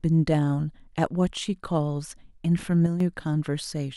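At 2.86 s the speech suddenly gets quieter, dropping by about 6 dB for 0.14 s before returning to full level at 3.00 s. This matches one channel dropping out: the likely cause is that one stereo channel went silent briefly, so the mono sum kept only half of the shared signal. The waveform shows a clean step down and back up, and the spectrogram dims evenly across all frequencies for that short stretch.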